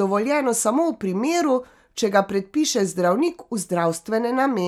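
No technical faults can be heard anywhere in the speech.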